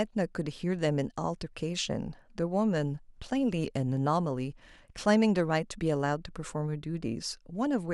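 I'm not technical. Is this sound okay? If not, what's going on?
Yes, no faults heard.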